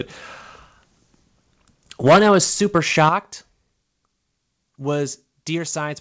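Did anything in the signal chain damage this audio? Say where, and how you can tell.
Yes. From 2.06 to 3.09 s the loudest peaks are flattened and carry a harsh, crackling edge, with around one in twenty samples sitting hard at the converter's limit. The cause is likely microphone overload at the converter, with input driven about 11 dB past its ceiling.

At 2.08 s the whole level, background included, drops about 3 dB in a single step. At 3.09 s, just as the distortion stops, it falls about 9 dB more. That is the microphone volume stepped down by call processing, likely reacting to the clipping.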